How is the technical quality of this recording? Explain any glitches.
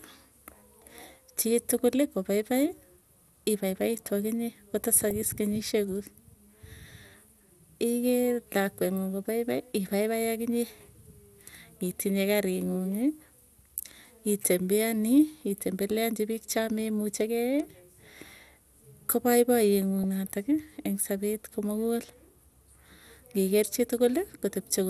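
The recording is technically compromised: the speech is dull and granular throughout, with two brief bursts of burbling damage.

Throughout, upper frequencies sound missing and the speech gurgles, likely MP2 compression starving sub-bands of bits at a low rate around 80 kbps; unlike burbling, this damage is steady.

From 4.93 to 5.11 s, and again at 20.04 s, DAB burbling adds short blips of noise in single sub-bands as a small fraction of bit errors corrupt the audio data for a few frames.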